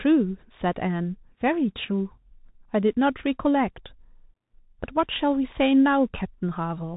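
A speech clip carried through a Bluetooth CVSD headset codec from start to finish: nothing gets past about 3.8 kHz, so it sounds boxed-in and narrow, and the one-bit up-down coding, which fits a 64 kbps link, leaves a grainy hiss and scratchy s sounds where loud highs outrun the adapting step.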